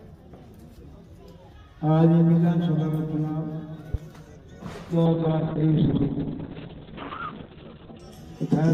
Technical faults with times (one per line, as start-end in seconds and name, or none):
3.94-3.97 loud pop
5.09-8.05 call bitrate drop